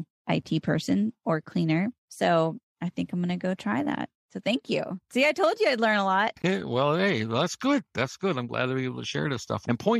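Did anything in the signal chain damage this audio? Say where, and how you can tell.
Yes. Playback shows a gap between stream segments. Hard-edged silent holes appear at 0.42 s (about 8 ms) and from 6.42 to 6.44 s (about 18 ms). Their spacing fits 2-second segments whose timestamps don't quite meet. The player inserts silence. No speech is lost.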